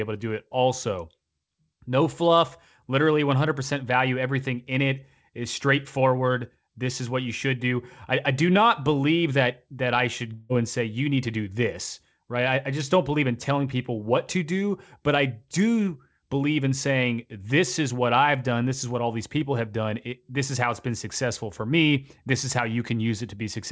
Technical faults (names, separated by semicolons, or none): long network dropout